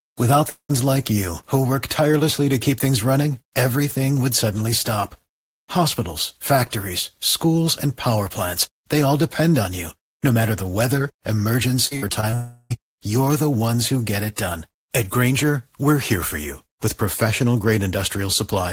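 At 0.49 s a smeared, buzzy tail of the preceding sound stretches out and fades to a brief silence before the audio resumes at 0.71 s with "like you who work". This is likely a long network dropout: about 0.2 s of audio never arrived, the receiver extended the last sound to cover the hole, and the lost stretch was skipped rather than recovered.

From 11.87 to 12.34 s the speech turns choppy and metallic, with a robotic, stuttering quality. This is repeated packet loss (robotic sound). Six separate gaps fall inside this half-second, the longest about 53 ms, and each one is patched by repeating the last sound. About a third of the stretch, roughly 0.15 s, is synthetic fill rather than real signal.

The choppiness runs straight into what is likely a second long network dropout from 12.34 to 12.72 s. Here the fill is a continuous buzzy smear with no fall to silence, covering about 0.36 s of missing audio before speech returns at "you're the ones who".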